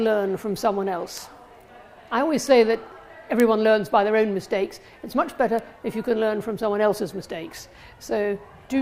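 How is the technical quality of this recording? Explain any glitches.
Four isolated ticks mar the recording. Each is a bit error spike, at 1.18 s, 2.47 s, 3.40 s and 5.59 s. A single bit flipped in a stored or transmitted sample, so its value jumped by a power of two and then snapped back. The first three last one sample; the last spans two. Peaks reach about -8, -14, -2 and -20 dBFS. Each is heard as a sharp, broadband click that has nothing to do with the surrounding sound.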